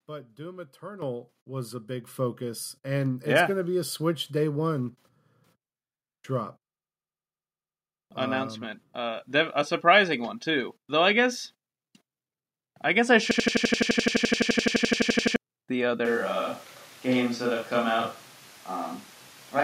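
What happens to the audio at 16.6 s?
At 16.6 s the sound is in the middle of a switch to a distant microphone, which begins abruptly at 16.05 s and lasts to the end. The close microphone's signal was likely lost, leaving a far pickup that hears more room. The sound turns hollow and roomy with thinner bass, though the level stays about the same. On a spectrogram, low frequencies weaken and reverberant smear fills gaps, with a noise floor roughly 25 dB below the speech. The waveform shows no drop in height.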